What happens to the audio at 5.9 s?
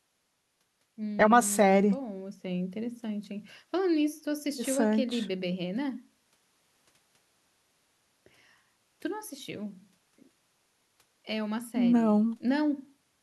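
Nothing goes wrong at 5.9 s: the speech there plays through intact, with no dropout, click, distortion or other fault at that moment.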